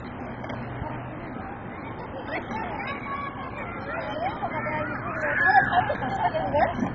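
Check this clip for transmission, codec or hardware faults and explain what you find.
One codec fault runs through the whole clip: MP2 compression, likely at a very low bitrate, which fits something around 16 kbps. From start to finish, the Layer II encoder has too few bits to share across its 32 sub-bands, so it shuts off every band above about 7.5 kHz and quantises the remaining ones coarsely. As a result, the audio sounds dull and muffled, with a gurgling, granular roughness as bands flicker in and out.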